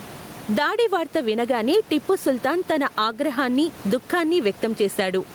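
Throughout the speech, the input gain is likely set far too high, so a fast limiter clamps down on every loud syllable. The room noise sits normally about 29 dB below the speech, and the gain swings by around 15 dB, leaving the level squashed and pumping.

From 1.72 to 1.77 s, between "దాడి వార్త వినగానే" and "టిప్పు సుల్తాన్", there is a wireless microphone noise hit. The FM radio link briefly fades as reflected signals cancel, and the receiver's noise rises as a short burst of static lasting about 50 ms.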